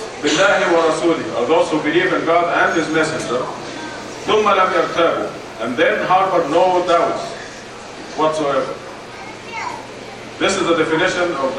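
A GSM phone buzz runs from 3.99 s to 6.55 s, about 27 dB below the signal. A nearby 2G handset on a call bursts at 216.7 Hz; the audio circuit rectifies those pulses into a steady, raspy, harmonic-rich buzz unrelated to the audio.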